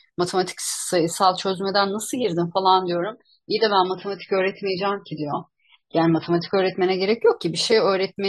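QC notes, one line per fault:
2.78–6.78 s, adaptive stream at a lower bitrate: with no gap, the sound abruptly turns dull and swirly, with nothing above 5.6 kHz, then snaps back. This fits a switch from 128 to 16 kbit/s MP3. Unlike a plain low-pass filter, coding artefacts accompany the lost treble.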